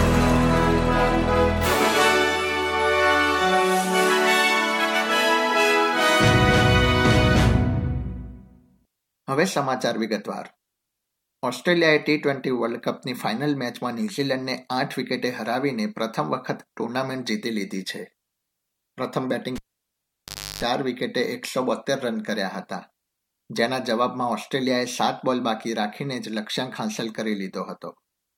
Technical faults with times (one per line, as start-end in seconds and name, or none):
19.56-20.63 cable pulled and plugged in